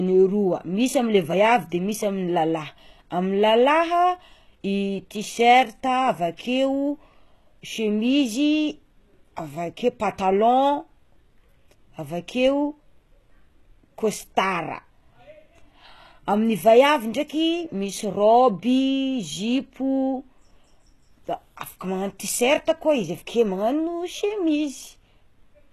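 From start to finish the speech carries plainly audible HE-AAC compression damage, likely from a very low-bitrate stream, around 16 kbps by the sound of it. The treble above the crossover isn't the real signal but lower bands copied upward and roughly shaped, so the harmonics don't line up. Sibilants come out gritty and metallic or lispy, and there's nothing at all above 12.3 kHz.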